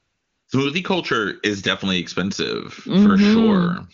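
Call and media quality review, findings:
AMR comfort noise, 0.00 to 0.47 s: sender's voice activity detection judged silence and withheld speech frames. The receiver substitutes smooth, steady synthetic noise for the real background until live audio resumes.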